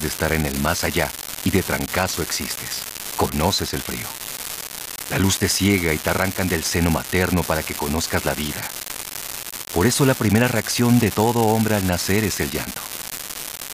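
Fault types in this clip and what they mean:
Unreliable data bit: one bit line in the sample path is flaky, so in a random share of samples that bit comes out wrong and the value jumps by a fixed step, here about -8 dBFS. Because every error is the same size and they're scattered randomly, you get a constant crackly fizz laid over the speech from start to finish, and it doesn't let up in the pauses either.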